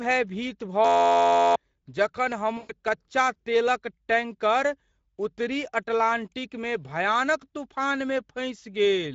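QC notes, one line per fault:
Throughout: Speex codec damage is plainly audible, which fits a setting around 16.8 kbps, leaving the speech hoarse and noisy with a noise-like upper band.
0.85 to 1.56 s: system hang loop. An 11.61 ms slice repeats at 86.1 Hz, giving a steady buzz, which fits a 512-sample buffer. About 0.7 s of audio is lost.
2.57 to 2.72 s: VoIP packet loss concealed by the speech codec. About 120 ms is extrapolated into a fading buzzy tone or coloured noise before "कच्चा तेलक टैंकर उत्तरी".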